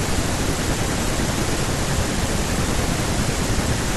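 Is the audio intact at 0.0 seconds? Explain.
Yes, the audio is intact at 0.0 seconds, with no dropout, click, distortion or other fault at that moment.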